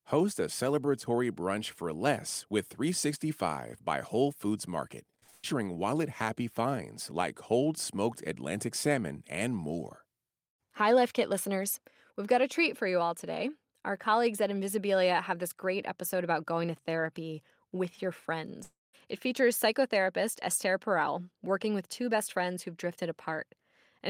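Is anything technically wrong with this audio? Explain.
Yes. Network packet loss damages the speech in two places.

Short concealed packet loss occurs twice in quick succession, at 5.19 to 5.24 s and 5.24 to 5.30 s, just before "wallet happy finds like". Audio packets failed to reach the decoder in time, about 20 ms and then 40 ms of them. The receiver patched each hole by extending the preceding sound for roughly 24 and 40 ms before blending back. This is heard as a brief smear or wobble.

A burst of packet loss follows immediately, from 5.30 to 5.45 s, still ahead of "wallet happy finds like". About 140 ms of consecutive audio went missing. The receiver kept extending the last sound for about 136 ms, fading it rather than falling silent. That produces a held buzz or hiss. The speech then resumes with the intervening stretch absent. Together with the two short losses, this creates one continuous damaged patch of about a quarter of a second.

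A long network dropout runs from 18.63 to 18.95 s, with about 300 ms of audio lost. The likely cause is that no audio arrived over the connection for that stretch. The receiver first stretches the last sound into a decaying buzz or hiss, and the final part of the gap drops to silence. The speech then picks up further on, with the lost portion never played.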